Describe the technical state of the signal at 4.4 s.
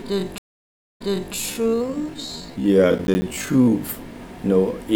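No fault can be heard at 4.4 s, and the signal is intact at that moment.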